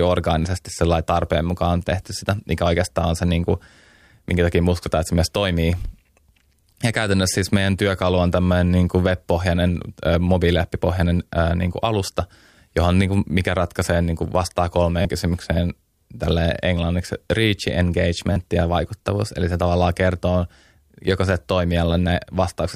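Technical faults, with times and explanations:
12.06 to 12.08 s, 15.02 to 15.05 s and 18.33 to 18.36 s, repeated buffer: after "äh niin kuin", between "ratkaisee niin kuin vastaa" and "kysymykseen tälle englanniksi reach", and just before "ja vaikuttavuus", the same tiny slice of speech plays two or three extra times with hard joins, which fits a 10 ms buffer. Each time, roughly 20 to 30 ms of speech is lost. The result is a brief buzzy stutter rather than a silent gap, which sets it apart from a dropout, and the repeated identical cycle sets it apart from a single click.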